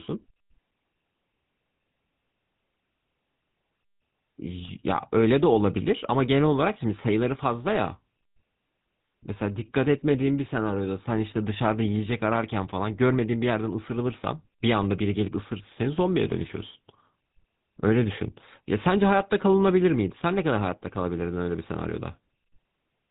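GSM full-rate codec damage runs through the whole speech clip. The codec models the vocal tract and excites it with sparse, regularly spaced pulses, and the rate points to 13 kbps. This leaves a plainly audible buzzy, gravelly roughness, with nothing above 3.8 kHz surviving.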